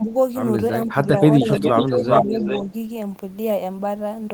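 Speech, with level dips and a delayed second copy of the talker. Speech suppressed in double talk appears three times. From 0.00 to 0.12 s the level falls by about 10 dB. From 0.87 to 1.52 s it sags by about 5 dB, over roughly 0.4 s in total. From 1.69 to 2.34 s it drops by about 10 dB again, across about half a second. The likely cause is an echo canceller meeting both sides talking at once. It could not tell this talker from loudspeaker echo, so it turned everything down. An echo leak is heard twice. From 0.88 to 0.93 s a faint copy trails the speech by 464 ms, about 30 dB down. From 1.53 to 2.73 s a much stronger copy follows at 404 ms, only about 5 dB below the speech. This likely comes from a far end on loudspeaker whose canceller let part of its microphone pickup return down the line.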